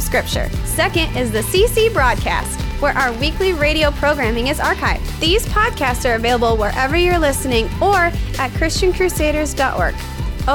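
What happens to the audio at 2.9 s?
A train of clicks runs from 2.12 to 3.28 s, so 2.9 s falls inside it. Around fifteen sharp, similar-shaped pulses land at roughly 10.5 per second, unevenly spaced, each peaking about 5 dB above the surrounding sound. They are heard as an irregular ticking or popping laid over the audio. Something is injecting repeated impulses into the signal path, likely interference from nearby equipment or a faulty connection or power supply.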